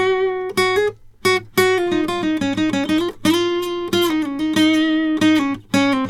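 No technical faults can be heard in this music. Nothing in the audio points to a problem in the chain that carried it.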